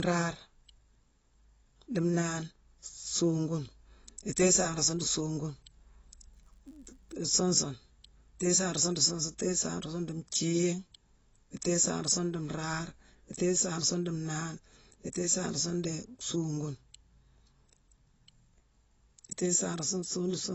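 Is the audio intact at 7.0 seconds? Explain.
No. From 6.34 to 7.14 s, just before "suun sune", a filter restarted on every block drops its state at each block boundary, so each block opens with a small transient. The result is a regular buzz at 93.8 Hz, which fits a 512-sample buffer. Unlike random clicks or dropouts, it is strictly periodic and rises and falls with the speech level. Across the whole clip there is also plainly audible dulling, together with a warbling, fizzy texture on sibilants, likely from AAC compression at a low bitrate. Those swirling artefacts, rather than a clean loss of treble, distinguish it from a simple low-pass filter.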